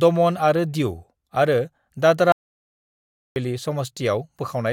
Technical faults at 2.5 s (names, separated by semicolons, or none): audio dropout to silence